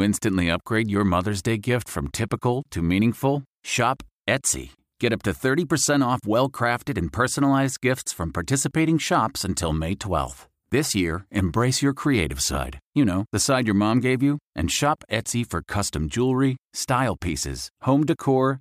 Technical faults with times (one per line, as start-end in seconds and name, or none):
none